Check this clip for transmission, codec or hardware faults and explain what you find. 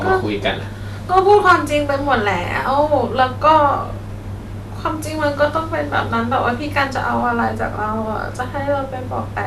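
Hard clipping occurs from 1.17 to 1.54 s. The speech overdrives a stage by about 5 dB, so peaks are cut flat. Added high harmonics give a crackle on peaks.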